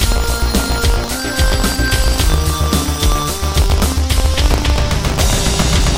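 Buffer tearing runs throughout these sounds as a robotic 50 Hz buzz that is heard only while sound is present. The software writing the ring buffer and the hardware reading it have slipped, so every 20 ms period contains a small slice of audio about 70 ms old, with a hard join at each end.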